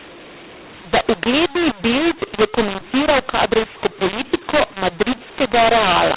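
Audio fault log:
Throughout, mu-law and A-law mixed up: A-law samples read as mu-law scramble levels and lift quiet ones, making speech harsh and pauses noisy.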